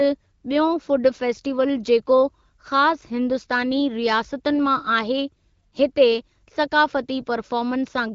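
No technical faults are audible anywhere in this speech.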